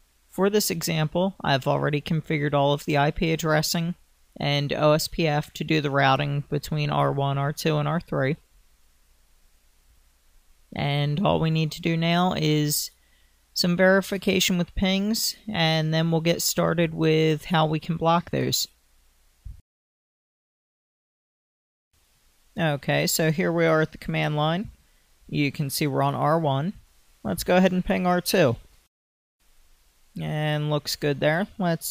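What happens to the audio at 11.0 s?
Nothing goes wrong at 11.0 s; the audio plays through that moment intact, with no dropout, click, glitch or other audible fault.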